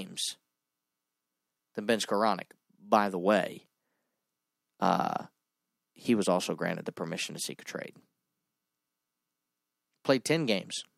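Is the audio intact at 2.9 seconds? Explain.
Yes, at 2.9 seconds the speech plays through intact, with no dropout, click, distortion or other fault at that moment.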